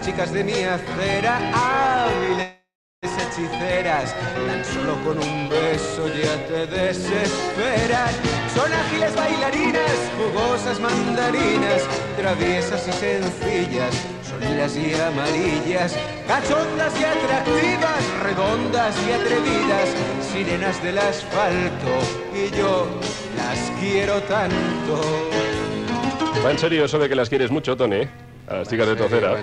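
At 2.42 s the sound stops and is replaced by a fading buzz of repeated texture, then about 0.35 s of silence, before resuming at 3.06 s with nothing lost. This is a call audio freeze, likely from delayed packets draining the jitter buffer. On a spectrogram it shows as smeared flat bands fading to a blank gap.

From 8.97 to 10.27 s a jitter buffer speed-up runs the audio at 130% with pitch unchanged, cutting roughly 0.4 s of built-up delay by dropping short pitch-period pieces. Gentler passes follow at 13.19 to 18.36 s (101%) and 22.45 to 27.57 s (102%). The waveform shows compressed periodicity, with no gaps.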